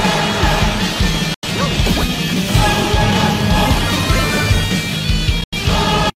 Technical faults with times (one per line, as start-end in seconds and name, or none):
1.34-1.48 digital broadcast dropout
5.44-5.57 digital broadcast dropout